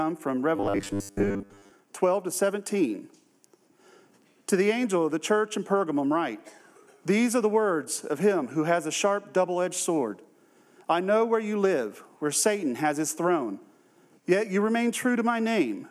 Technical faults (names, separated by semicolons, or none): robotic sound from repeated short buffers